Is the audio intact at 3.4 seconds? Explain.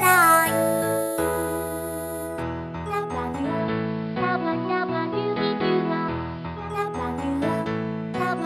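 No. Digital radio blending to analogue begins at 3.36 s and lasts until 6.73 s. The receiver lost its digital stream and cross-faded over about 260 ms to the station's AM broadcast. A faint hiss, roughly 30 dB below the signal, comes up with it, and the level shifts by about 1 dB until the digital audio returns.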